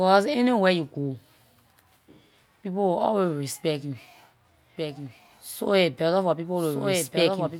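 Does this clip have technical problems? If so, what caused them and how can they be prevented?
Yes, there's a doubled audio track from 4.77 s to the end: a second copy of the speech cuts in abruptly, trailing about a second behind and roughly 5 dB quieter, with no room tail. It's likely a second, slower capture path getting mixed in. Mute or route out any duplicate input before recording.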